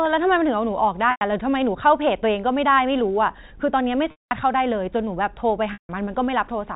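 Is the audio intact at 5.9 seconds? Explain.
No. Packet loss with pitch repetition from 5.73 to 5.89 s drops about 160 ms; the repeated pitch period fades to silence, and speech returns with a short cross-fade right at 5.9 s.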